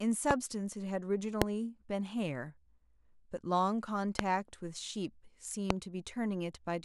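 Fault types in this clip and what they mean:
Loud pop: four single sharp pops, at 0.31, 1.42, 4.19 and 5.70 s, each about 20 ms long and far louder than the speech. The speech carries on underneath without a gap, unlike a dropout. A likely cause is a voltage spike from a plug, switch or static.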